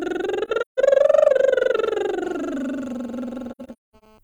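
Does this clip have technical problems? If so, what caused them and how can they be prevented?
Yes. AAC frame loss with muting occurs at 0.45 to 0.79 s and 3.51 to 4.04 s. Lost frames were decoded as silence, leaving soft-edged holes in the music totalling about 213 ms and 384 ms, with the longest gaps around 150 ms and 200 ms. Prevention: use a transport with retransmission or forward error correction, plus decoder concealment.

GSM signalling bursts run from 0.92 to 2.26 s. A nearby 2G phone's intermittent 217 Hz radio bursts were rectified by the audio circuit, producing galloping ticks and short buzzes about 20 dB below the music. Prevention: keep phones away from the audio gear.

GSM phone buzz runs from 2.27 to 4.19 s. A nearby 2G phone in a call transmitted continuously at 217 bursts per second, producing a steady raspy buzz about 29 dB below the music. Prevention: use shielded, balanced cabling and switch phones off or to flight mode.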